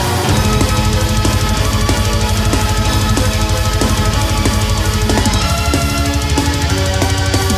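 The whole clip, start to finish, runs fast and sits high because of a wrong sample rate. The samples are being played back quicker than they were captured, with no conversion, so everything speeds up by about 1.45 times and the pitch rises by roughly 6.45 semitones. That ratio fits material recorded at 22 kHz but played at 32 kHz. Timing and pitch shift together, which gives the sound that hurried, chipmunk-like lift.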